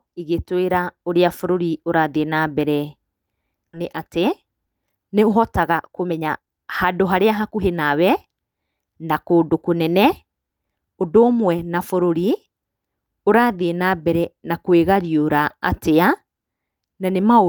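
A speech clip in which a stretch of audio was dropped while later audio was already queued, producing a skip ahead at 3.73 to 3.75 s. With later packets already waiting, playback was moved forward by roughly a second and the two sides were joined directly, with no filler. A listener hears the speech lurch onward, about a second of it simply gone, and the delay drops by a similar amount at that instant. Straight afterwards, from 3.83 to 7.82 s, the buffer was still holding more audio than its target, so the receiver trimmed short pitch-period slices again and again to bring the delay down, a jitter buffer speed-up. Playback runs at 114% of normal speed while the pitch stays put, removing around half a second in total, and the speech over those four seconds sounds noticeably rushed.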